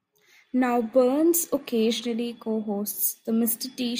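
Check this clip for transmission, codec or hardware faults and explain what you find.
Two stretches of corrupt frames decoded: a brief, quieter glitch at 2.00–2.04 s and a longer, much louder one at 3.03–3.19 s, each heard as a chirp, squeak, blip or burst of noise. Damaged compressed frames were decoded anyway, misplacing energy across frequencies. A spectrogram shows stray broadband or tonal smears; the waveform shows spiky bursts.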